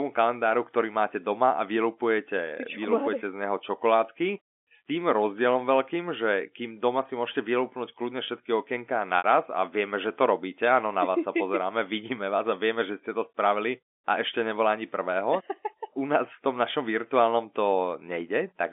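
Speech over a G.711 phone line, band-limited to roughly 250 Hz to 3.5 kHz, with one packet loss with pitch repetition from 9.18 to 9.24 s, right after "vylúpnúť kľudne všetky okienka" and before "a vieme že to". About 60 ms goes missing, which fits three 20 ms packets, and the receiver fills it by looping the last pitch period, so you hear a brief held, buzzy tone that fades out before the speech picks up again.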